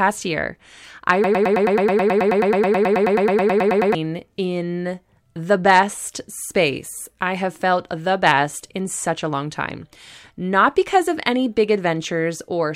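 From 1.24 s to 3.95 s, the playback or streaming chain likely stalled and kept re-sending the last fragment it held, producing a broken-record loop. A slice of speech about 0.11 s long repeats back to back, 25 times in a row, giving a rapid, machine-like stutter that buzzes at roughly nine repetitions per second. Whatever should have been said during those nearly three seconds is missing, and the speech picks up again after the loop ends.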